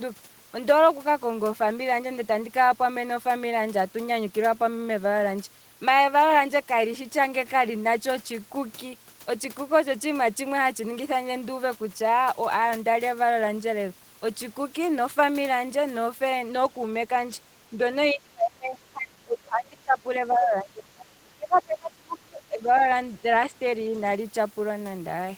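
From 18.12 to 19.98 s, 20.18 to 21.09 s and 21.31 to 22.81 s, the speech is suppressed in double talk, sinking by up to roughly 20 to 25 dB. The likely cause is an echo canceller ducking the talker while both sides speak. The waveform shows collapsed envelopes, and the spectrogram shows faded upper bands. A brief 5 dB dip follows at 23.48 to 23.54 s. At 20.30 to 20.35 s, the other side's voice leaks through, likely as uncancelled loudspeaker echo, about 25 dB below the speech. It appears as a faint spectral smear.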